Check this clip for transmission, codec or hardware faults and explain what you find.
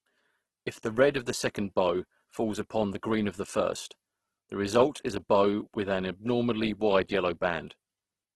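One codec fault runs through the whole recording.

Opus compression, throughout: likely CELT-mode Opus near 12 kbps, filling starved bands with folded or noise energy. The speech sounds heavily grainy and rough, with nothing above 12.3 kHz.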